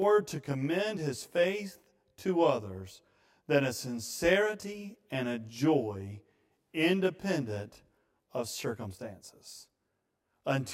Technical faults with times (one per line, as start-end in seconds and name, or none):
0.00-10.73 channel delay (comb filtering)